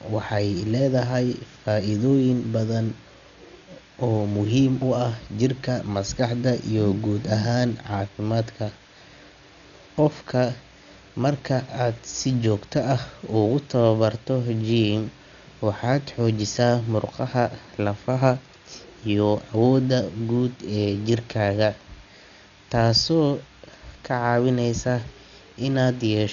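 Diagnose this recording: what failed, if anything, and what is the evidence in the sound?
The codec stage failed: throughout the speech the sound is dull, and the spectrogram shows nothing above 7 kHz, a hard ceiling rather than a gradual roll-off. Heavy coding damage is audible as rough, fluttering noise around voiced tones, seen as speckled, grainy texture between harmonics. This is likely Dolby Digital compression starved of bits. The encoder narrowed the band and left many frequency lines without mantissa bits, and the decoder filled those with dither noise. The damage points to a bitrate near 48 kbps.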